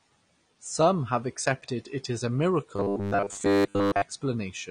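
Throughout, the speech is dull and smeared, plainly audible AAC compression damage, likely from AAC-LC at a low bitrate around 32 kbps. From 2.76 to 4.02 s, after "accepted it as a", a rigid 100 Hz metallic buzz sets in: robotic sound, likely from repeated short buffers, with about 10 ms chunks looped through most of the span.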